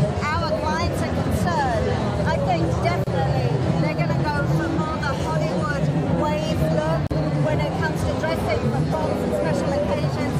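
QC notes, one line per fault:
3.04–3.07 s and 7.07–7.11 s: gap at a join of encoded pieces. The sound drops out for about 28 ms, then 40 ms, four seconds apart. Each separately encoded piece kept its start delay and end padding. The codec smears the edges.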